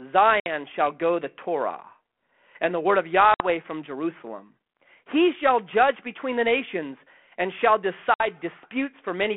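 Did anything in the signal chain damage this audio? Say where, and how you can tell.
Yes. Packet loss on an ADPCM call at the network stage: a few packets (60 ms of audio) were lost at 0.40 s before "shall go the", at 3.34 s after "and the word of", and at 8.14 s after "the nations and shall". Silence filled each gap, leaving hard-edged holes. The G.726 decoder's predictor and step size then drifted from the sender's, so speech returns distorted for a moment before it resyncs.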